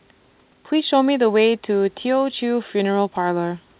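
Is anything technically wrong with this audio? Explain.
No, nothing is wrong: the speech carries the expected narrowband call-codec character with nothing above 4 kHz, consistent with a 64 kbps G.711 mu-law path, and the room's background noise sits about 42 dB below the speech.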